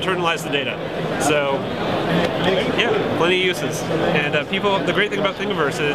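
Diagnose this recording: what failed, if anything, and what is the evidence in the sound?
Nothing failed in this recording, and the sound gives no evidence of any fault.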